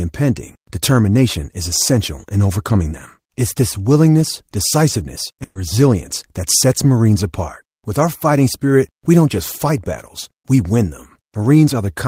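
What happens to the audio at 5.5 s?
A burst of packet loss hits from 5.43 to 5.57 s: a run of consecutive packets never arrived in time, so about 120 ms of the speech is simply gone. The receiver covered the hole by extending the last sound it had and fading it down over those 120 ms, then a brief 20 ms of silence, before the audio picks up again. After "this willingness decisiveness" you hear a smeared, dying tail, then a jump straight to "resilience that sets".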